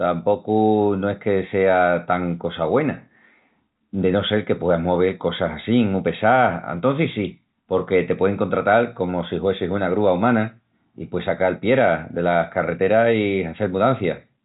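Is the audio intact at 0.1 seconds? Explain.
Yes, the audio is intact at 0.1 seconds, with no fault at that moment.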